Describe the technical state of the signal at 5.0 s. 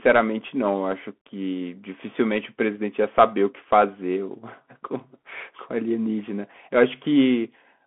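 At 5.0 s the speech sounds thin and boxed-in, with a granular hiss beneath it and a scratchy edge on sibilants. This is the Bluetooth CVSD headset codec, present across the whole clip. It tracks the waveform with one bit per step, which fits a 64 kbps stream. The line band runs from about 200 Hz to 3.4 kHz, and nothing passes above 3.8 kHz. Where the adaptive step cannot keep up with the signal, the damage is plainly audible.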